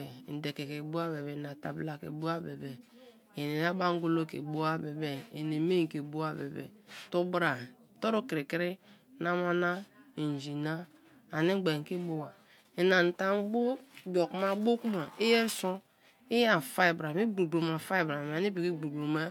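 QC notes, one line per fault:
No technical faults are audible; the signal holds steady across the whole clip.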